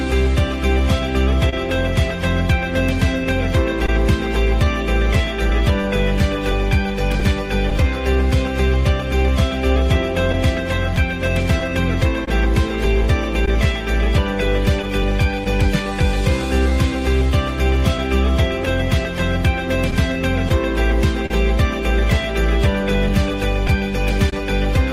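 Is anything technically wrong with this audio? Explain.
Yes. Three related timing faults run through the audio.

Clock drift between sender and receiver is present throughout. The sender's clock runs slow by roughly one and a half percent, so the receiver's jitter buffer keeps draining and must be refilled. That causes small, irregularly spaced timing hiccups across the whole clip.

Repeated timing corrections run from 4.65 s to 17.31 s. To keep pace with the slow sender, the receiver repeatedly stretches short pieces, playing at 99% speed and adding around 70 ms overall. Each edit is small and unevenly spaced.

Scattered short gaps appear in four stretches: 1.49 to 3.89 s (about three gaps), 5.83 to 7.72 s (about four), 10.32 to 21.31 s (around fifteen) and 23.09 to 24.33 s (about three). Lost or late packets left brief holes, the longest a few tens of milliseconds. The receiver filled each by continuing the previous sound, leaving small ticks and smears.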